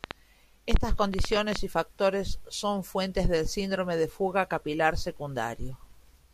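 From 0.04 to 1.57 s there's a train of clicks, around ten uneven pops at about 6.6 per second, well above the speech, likely interference, ending just before "y factores son fuentes".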